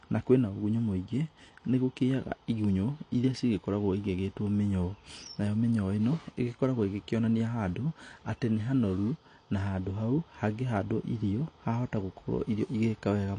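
From start to finish the speech carries AAC compression damage: content stops near 9.8 kHz, and sibilants turn fizzy and warbling. A spectrogram shows a hard ceiling, which likely reflects AAC-LC encoding at a low bitrate around 32 kbps.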